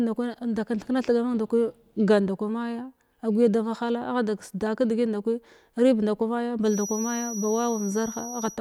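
Speech clip with a feedback whistle entering at 6.61 s, just after "rib nda kwa maya," and continuing to 8.6 s. A thin, steady tone at 5.8 kHz sits roughly 15 dB below the speech and swells and fades slowly in level. The likely cause is a loudspeaker-to-microphone loop running right at the edge of feedback, so that single high frequency is sustained without building into a full howl.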